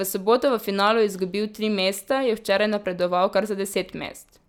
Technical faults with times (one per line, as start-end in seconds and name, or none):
none